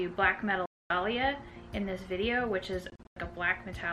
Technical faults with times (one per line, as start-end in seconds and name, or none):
0.66-0.90 Bluetooth dropout
2.90-3.16 Bluetooth dropout